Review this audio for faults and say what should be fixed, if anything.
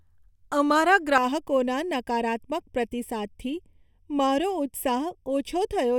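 From 1.18 s to the end of the speech, the sound turns hollow and phasey: a channel delay (comb filtering). One channel arrives late by a fraction of a millisecond, under half a millisecond, and when the two are summed to mono the shared content cancels at evenly spaced frequencies, the first notch landing around 1.5 kHz. Unlike flanging, these notches stay fixed rather than sweeping, and unlike room reverb there is no added tail. Align both channels sample-accurately before any mono fold-down.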